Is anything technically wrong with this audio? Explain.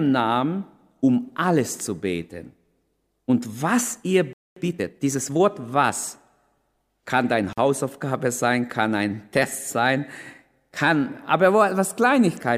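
Yes, three faults disturb this speech clip.

Playback stall, 4.33 to 4.56 s: right after "was ihr" the audio drops to silence for about 231 ms, then resumes where it left off. The likely cause is the player running out of buffered data or having its output thread blocked.

Time-compressed catch-up, 4.56 to 5.48 s: to work off the backlog from that stall, the player trims and cross-fades small slices, running the speech at 1.25 times normal speed. The speech sounds rushed but keeps its pitch.

Gap at a join of encoded pieces, 7.53 to 7.58 s: after "kann deine" a silence of about 45 ms opens in continuous speech. Two separately encoded pieces were joined without removing the encoder's start delay and final-frame padding. The codec smears the edges, and the speech then carries on from where it stopped.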